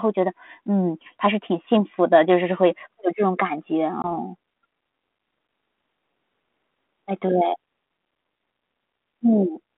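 Packet loss on an ADPCM call at 4.02 s leaves a 20 ms flat gap in the waveform and a blank spectrogram stripe. Speech then returns slightly distorted until about 4.08 s, while the decoder's predictor resynchronises.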